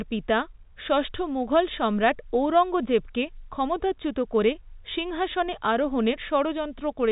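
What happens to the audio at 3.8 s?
Nothing goes wrong at 3.8 s: the speech carries on intact through that moment, with only the narrow, telephone-band sound of G.711 coding that runs under the whole clip.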